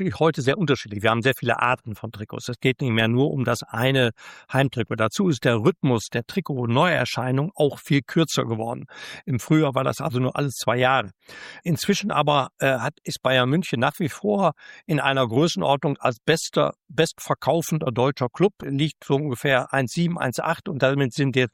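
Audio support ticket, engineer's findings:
No faults found on playback.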